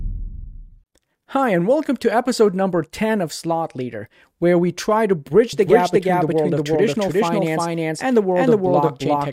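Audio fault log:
5.53 s to the end: doubled audio track. Right after "where we try to", a second full-band copy of the speech jumps in abruptly, around 0.4 s behind and at roughly the same level, with no decay or room colour. Likely a second, slower capture path.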